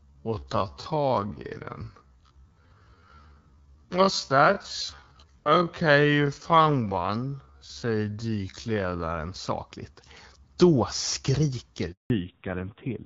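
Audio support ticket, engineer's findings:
Time-stretched section, 0.0 to 9.14 s: sound slowed to about 0.56x speed with pitch held, drags. Likely cause is software repeating short segments to fill length.

Handover gap, 11.92 to 12.1 s: 180 ms dropout. Sound fades out fast, then silence. Network handover with no speech frames arriving until the new link came up.

Fallback to narrowband, 12.1 s to end: nothing above 4 kHz, duller and rougher than the preceding HD Voice (AMR-WB, light coding damage). Points to a switch to narrowband AMR at a low rate, around 5.9 kbit/s.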